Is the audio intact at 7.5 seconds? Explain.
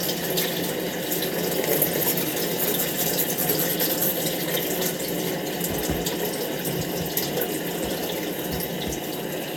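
Yes, the sound at 7.5 seconds plays through intact, with no dropout, click, distortion or other fault at that moment.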